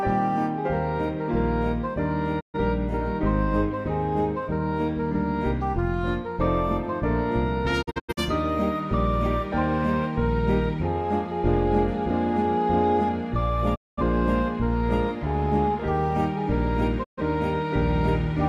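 Four digital broadcast dropouts break up the audio, at 2.39 to 2.57 s, 7.81 to 8.21 s, 13.74 to 14.02 s and 17.03 to 17.22 s. Each time, the receiver stops getting valid frames and mutes with a 20 ms fade, leaving holes of about 130 to 210 ms. The 7.8 s event is several short gaps spread over 341 ms, the longest 85 ms. Whatever was transmitted during the gaps is lost.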